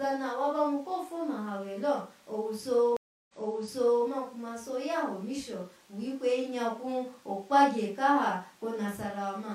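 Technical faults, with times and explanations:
2.97 to 4.06 s, stream reconnect: The speech cuts out for 323 ms as the connection drops and the player reconnects. A fresh decoder starts mid-stream. Playback resumes 768 ms earlier, so a stretch of speech repeats, because the server resent a burst.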